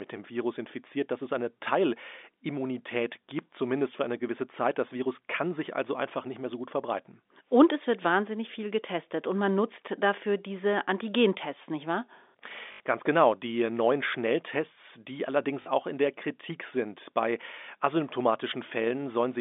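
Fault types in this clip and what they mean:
Packet loss with last packet repeated: the receiver lost two short runs of packets and filled each gap by replaying the most recent packet until new audio arrived. The first gap is an 80 ms stretch at 12.72 s. The second is a 40 ms stretch at 15.62 s, between "die allerdings" and "auch in der". Both lengths fit 20 ms packets. Each run of repeats sounds like a brief robotic stutter fluttering at about 50 Hz over the band-limited telephone audio.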